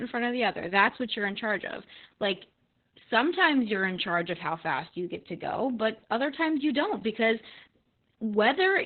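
From start to finish, the speech carries heavy Opus voice compression. Nothing survives above about 4.3 kHz, so the band is narrowband, which points to the SILK linear-prediction coder working at a very low rate, near 8 kbps. At that rate the excitation is coded coarsely. The voice sounds muffled and boxy, with a hoarse, buzzy edge. A faint robotic quality runs through it, and consonants lose their crispness.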